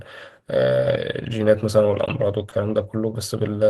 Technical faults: short stall from a late packet

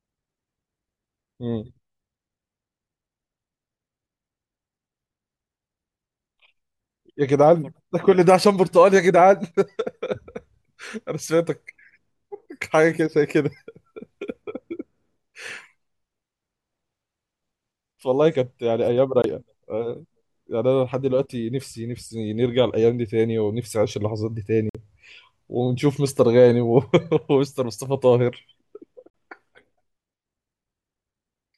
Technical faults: block of digital silence

